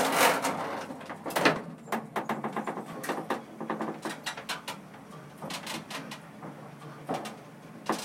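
Regular clicks recur every 1.36 s from 0.21 s to 7.02 s, a pattern typical of clock drift buffer slips, likely from unsynchronised device clocks several hundred ppm apart dropping or repeating a few dozen samples.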